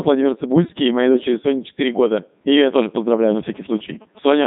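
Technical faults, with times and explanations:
Throughout: Codec 2 vocoder. The speech has a robotic, buzzy quality from start to end. The damage is heavy. The original waveform is gone. The decoder rebuilds each moment from pitch, voicing, energy and a rough spectral envelope, then synthesises it from sine waves. Fine detail and natural breathiness are lost, and the result sounds mechanical. The quality points to the codec's highest mode, around 3.2 kbit/s.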